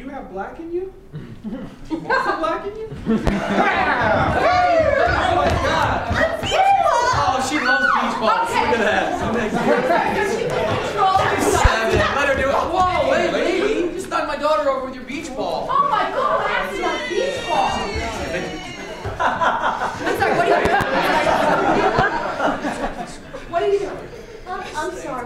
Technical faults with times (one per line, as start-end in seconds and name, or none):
3.27-3.31 loud pop
20.65-20.84 loud pop
21.99-22.02 loud pop